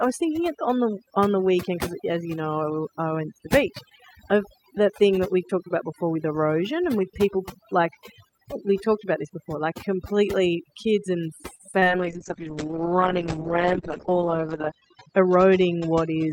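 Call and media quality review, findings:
Overdone noise removal, whole clip: the background breaks into twinkling, warbling specks. The suppressor probably cuts any frequency band near its noise estimate, taking quiet speech components with it. Spectrogram: scattered isolated time-frequency dots in the gaps, with ragged, holey speech edges.

Repeated packet loss (robotic sound), 11.55–11.88 s, just after "like completely kids and": choppy sound with pieces missing. The jitter buffer or packet loss concealment (PLC) filled 4 gaps, the longest 40 ms, and about a third of the span is concealed. Waveform: repeated, copied-looking cycles with abrupt joins. Spectrogram: smeared, stretched harmonics.

Call bitrate drop, 11.99 s to the end: the sound turns rough and muffled and does not recover. The congestion controller lowered the Opus target from 64 to 8 kbps for 2.77 s at the lowest, narrowing the bandwidth from 20 kHz to 8 kHz. 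Spectrogram: a hard ceiling at 8 kHz with coarse, blocky texture below it.

Jitter buffer speed-up, 14.75–15.29 s: the speech sounds hurried at 106% speed with the pitch unchanged. The receiver drained excess buffered audio by cutting short pitch-period pieces, a few tens of milliseconds in total. Waveform: the segment looks compressed in time, with small splice points. Spectrogram: harmonics stay level while syllables shorten.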